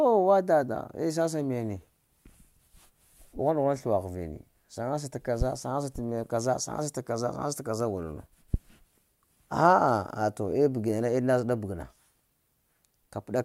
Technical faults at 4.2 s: none

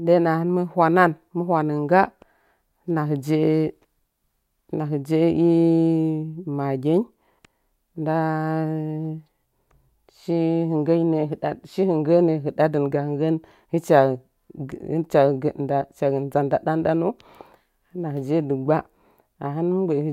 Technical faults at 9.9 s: none

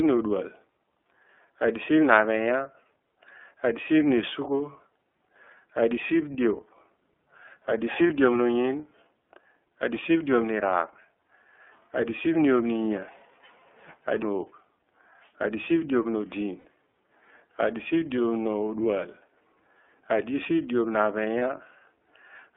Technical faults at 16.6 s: iLBC codec; lost iLBC frames

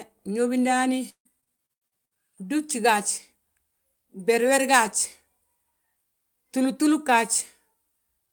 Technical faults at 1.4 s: repeated packet loss (robotic sound)

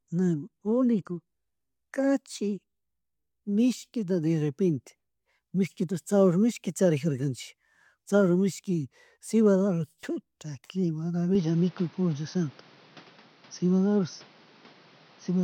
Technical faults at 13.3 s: input switched to a poorer device

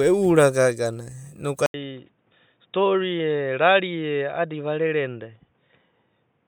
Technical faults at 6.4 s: input switched to a poorer device

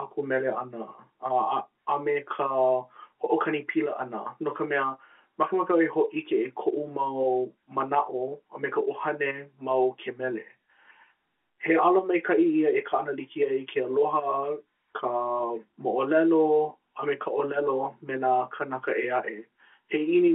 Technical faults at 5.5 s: none

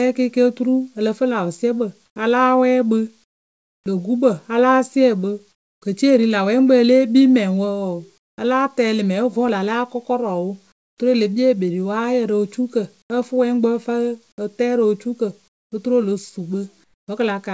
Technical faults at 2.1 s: comfort noise in place of the background

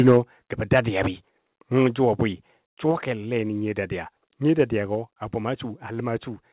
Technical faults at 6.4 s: none

